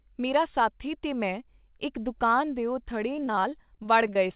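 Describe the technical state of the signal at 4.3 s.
At 4.3 s the speech is inside a stretch of repeated packet loss (robotic sound) running from 3.13 s to the end. Sixteen short holes, none over 21 ms, are each patched by extending the last sound, giving a choppy texture rather than one clean dropout.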